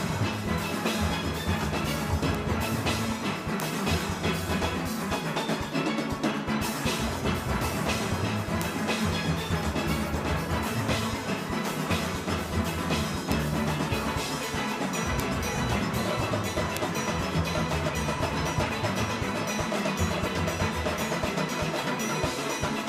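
Ticks recur about every third of a second, 0.15 to 22.72 s: word clock ticks, an unlocked receiver slipping one sample each time.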